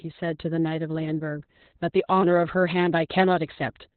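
Opus voice compression runs through the whole speech clip: nothing survives above about 4.2 kHz, a narrowband cut, and the coarse SILK coding makes the speech hoarse and slightly robotic, fitting roughly 8 kbps. That rough, synthetic texture separates it from a plain low-pass filter, which would only muffle.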